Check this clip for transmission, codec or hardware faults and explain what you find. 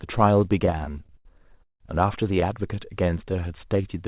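Two delivery faults stand out, both from a call path whose sound stops at 4 kHz, which fits narrowband G.711.

From 0.66 to 1.81 s there are repeated stalls (stutter): thirteen short breaks where packets arrived late, the jitter buffer emptied, and the receiver stretched the last sound, the longest for about 168 ms, covering roughly a third of that stretch. Unlike outright packet loss, nothing is missing; the speech drags and hiccups.

From 3.04 to 3.83 s comes a jitter buffer slow-down: the receiver repeated single pitch periods to rebuild its reserve, adding about 99 ms so that stretch plays at 88% speed. The pitch stays put, which separates it from a clock or resampling error, and the sound is drawn out rather than broken.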